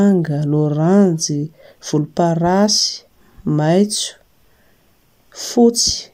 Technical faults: none

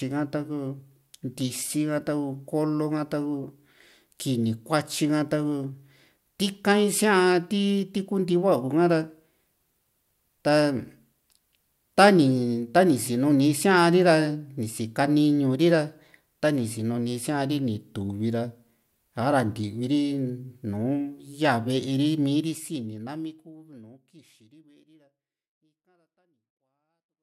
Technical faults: none

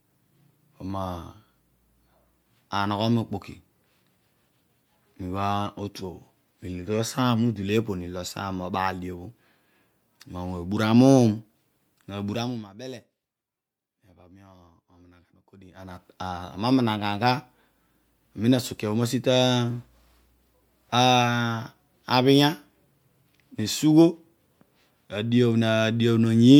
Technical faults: zipper noise

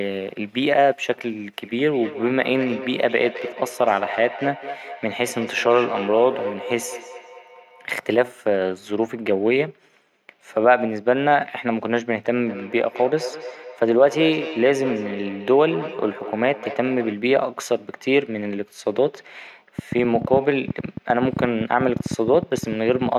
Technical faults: feedback echo between two devices; train of clicks

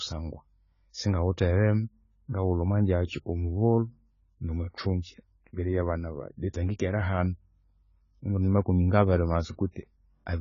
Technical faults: AAC compression

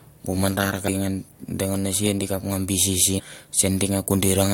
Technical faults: damaged data in a compressed stream

